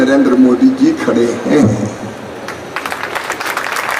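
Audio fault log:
0.33–3.93 s, clock drift buffer slips: a small click lands every 0.6 s, about seven in all, likely from two devices on separate clocks disagreeing by around 300 ppm, so the buffer between them drops or repeats a handful of samples, nicking the sound each time.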